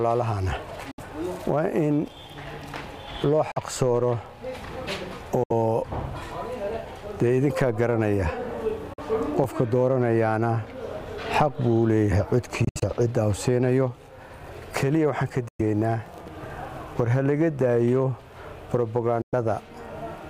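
Bluetooth dropouts at 0.91, 3.51, 5.43, 8.93, 12.64, 15.48 and 19.22 s cut the sound to silence for about 64, 43, 64, 43, 107, 107 and 107 ms. The fifth is broken into several short gaps spread over 171 ms. These are likely wireless packets arriving too late and being discarded. Each hole has a sharp edge or a brief fade, and the audio resumes further on, as though it had kept playing underneath.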